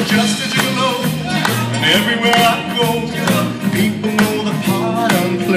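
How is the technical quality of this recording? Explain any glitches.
No glitches or technical faults can be heard here.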